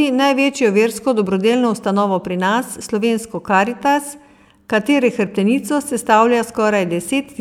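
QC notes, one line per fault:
No audible faults found in this speech recording.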